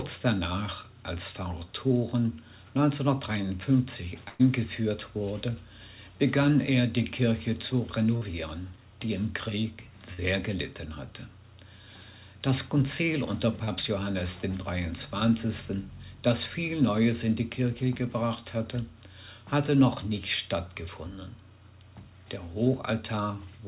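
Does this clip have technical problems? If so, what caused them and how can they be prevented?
Yes. There are two bursts of packet loss, at 4.28 to 4.41 s and at 10.13 to 10.20 s. In each, the receiver stretched the last sound and faded it for about 110 ms and about 50 ms. The audio then resumes with roughly 120 ms and 60 ms missing. A larger jitter buffer or redundancy such as forward error correction would prevent this.

There is also a short concealed packet loss at 13.64 to 13.69 s. It is heard as a brief smear. About 30 ms was synthesised from the preceding sound and blended back, and some 40 ms of real audio is gone. A steadier network path would help prevent it.

The band limit at 4 kHz fits the G.711 mu-law call codec working normally.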